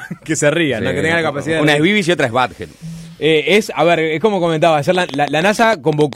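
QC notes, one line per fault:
4.95–6.14 s, train of clicks: likely interference or a faulty connection injects around ten pulses, about 9.4 per second, unevenly spaced, ticking well above the sound.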